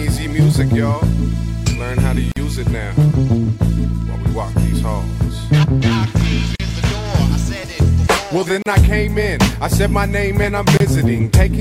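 The audio has a gap at a join of encoded pieces at 2.32, 6.56, 8.62 and 10.77 s, where about 30 to 48 ms of silence appears from untrimmed encoder delay and padding.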